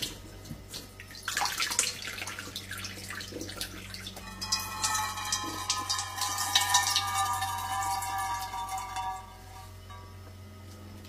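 An everyday-sound recording with damaged data in a compressed stream at 0.70–0.75 s and 4.18–4.24 s. Corrupted bytes make the decoder misread those frames and lose sync while it hunts for the next valid header, producing a brief glitch each time.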